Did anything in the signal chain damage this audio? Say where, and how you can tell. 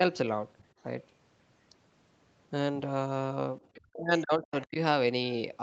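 Yes. The damage sits in the call processing stage. There are brief scraps of the other side's voice leaking through, at 3.65 to 3.78 s and again at 4.44 to 4.65 s. The first is very faint, about 35 dB below the talker. The second is stronger, at about 25 dB down. Both are short fragments, not a continuous second voice. The likely cause is a loudspeaker feeding the far end back into the microphone, with the echo canceller leaving some residue behind.

There is also speech suppressed in double talk, from 3.76 to 4.77 s. The talker's level dips hard there, by as much as about 40 dB at its deepest. Roughly 0.7 s of that span is affected. The dip overlaps the leaked fragments, so both sides were active together. The echo canceller likely could not tell the talker from the echo and turned everything down.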